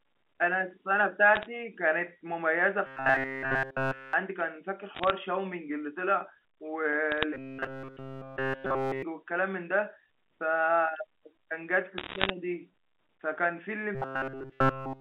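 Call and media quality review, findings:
Bit errors on a digital phone line, 1.36–1.47 s, 4.95–5.10 s, 7.12–7.23 s, 11.98–12.30 s. Sharp ticks and crackle over the speech, worst at 11.98 s. Flipped bits corrupt single A-law samples, at a fraction of a percent, rising to around 1% in the last burst.

Robotic sound from repeated short buffers, 2.87–4.13 s, 7.34–9.03 s, 13.95 s to end. Rigid metallic buzz at 133 Hz, with no fresh audio getting through. Likely cause is buffer underrun: a roughly 7.5 ms block replayed, which fits a 60-sample buffer at 8 kHz. G.711 band limit is audible as expected on the 64 kbps line.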